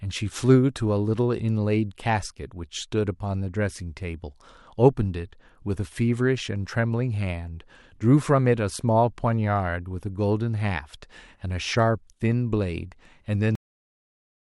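At 13.55 s the final buffers were never written, giving a cut-off end: the speech stops mid-sound and drops straight to digital silence without any decay.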